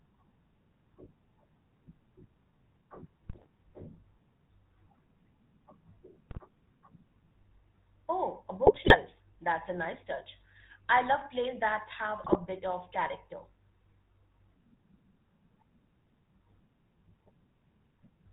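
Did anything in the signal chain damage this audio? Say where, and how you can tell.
Yes. The GSM full-rate codec colours the whole clip. Speech sounds buzzy and gravelly, with nothing above 4 kHz. That fits a 13 kbps pulse-excited coder.

GSM bit errors on the radio link hit at 3.28–3.46, 6.30–6.39, 8.66–8.97 and 12.24–12.37 s, after "love plays that have". Squawks and gargling show corrupted decoder parameters.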